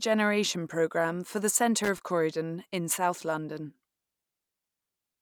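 A worn or dirty contact in the signal path briefly lost and regained connection from 1.84 to 2.00 s, just after "programme for the", producing loose connector crackle. For about 0.16 s the speech is rapidly chopped on and off as the contact makes and breaks, and any DC present on the line jumps with each break, adding pops. The result is an irregular burst of scratchy crackle laid over the speech at that point.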